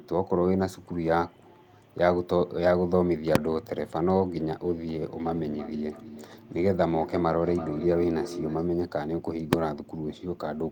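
A sharp bang at 3.35 s, and another at 9.53 s, cuts through the speech. Each is invalid numbers at full scale: a calculation produced infinite or invalid values, pinning the output to its limit for a block of about 1.45 ms, which fits a 64-sample block, too short to be heard as anything but one bang.

From 5.2 s to 8.71 s each word comes back roughly a third of a second later, repeating and growing thinner and more ringing, peaking at about 12 dB below the speech. This is feedback echo between two devices on the same call in one room: one plays what the other's microphone sent, that microphone picks it up again, and neither echo canceller removes sound played by the other device.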